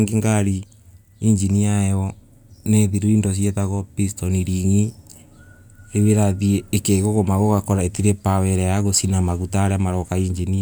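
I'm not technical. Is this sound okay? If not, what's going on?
Yes, this sound is okay; there's nothing going on with it that needs fixing.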